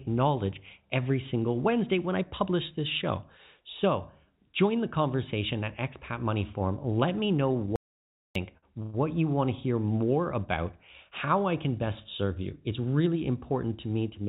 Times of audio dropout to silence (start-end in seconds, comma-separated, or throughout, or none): 7.76-8.35